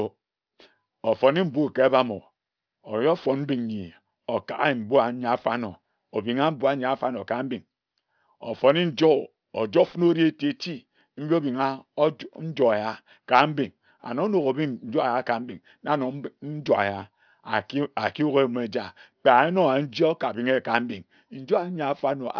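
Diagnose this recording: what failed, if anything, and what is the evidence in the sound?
Aliasing from a sample-rate conversion stage, present throughout. Sibilants sound gritty and metallic, and energy runs hard up to a band edge at 5.5 kHz, which fits a drop to 11 kHz without an anti-alias filter. Content above that folds back into wrong frequencies, roughly 30 dB below the speech.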